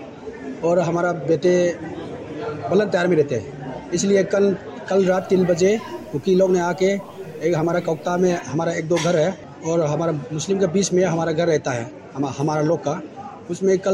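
From 5.07 to 8.41 s the sound turns grainy and gritty, the roughness rising and falling with the signal, roughly 35 dB below it. This is likely low bit depth without dither, fitting 8-bit truncation. The waveform shows visible steps, and the spectrogram shows signal-following broadband hash.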